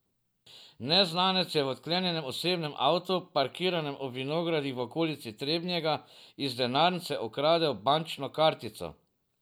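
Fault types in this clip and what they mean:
No fault can be heard anywhere in the speech. There is nothing to list here.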